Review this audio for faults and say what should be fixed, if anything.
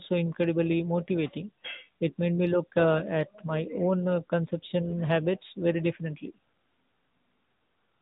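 AMR narrowband mobile codec damage runs through the whole clip. Nothing above 4 kHz survives, so the speech sounds muffled and phone-like. The voice is rebuilt from a vocal-tract model with sparse pulses, giving a plainly audible synthetic buzz. That fits AMR-NB at about 10 kbps. To prevent this, record or route the audio over a wideband path, not through a narrowband mobile speech codec.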